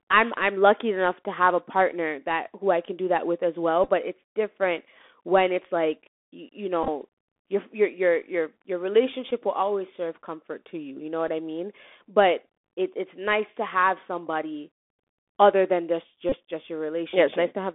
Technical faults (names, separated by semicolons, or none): Bluetooth CVSD headset codec; Bluetooth headset packet repeated